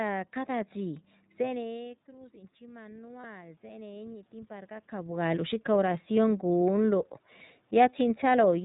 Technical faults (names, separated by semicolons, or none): iLBC codec; automatic gain rising; lost iLBC frames